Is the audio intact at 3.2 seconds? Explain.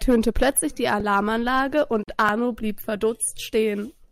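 Yes, at 3.2 seconds the speech plays through cleanly, with no audible fault at that moment.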